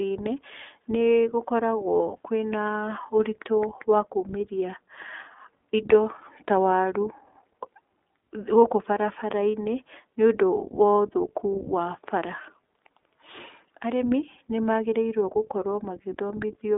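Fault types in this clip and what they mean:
iLBC codec: The speech sounds thin and boxed-in, with nothing below about 250 Hz or above about 3.6 kHz, and a plainly audible rough, slightly synthetic grain. This is the narrowband iLBC voice codec, which rebuilds the excitation of each short frame on its own without drawing on the previous one. The steady texture fits its 20 ms frame, 15.2 kbps mode, where frame-by-frame coding trades smoothness for robustness.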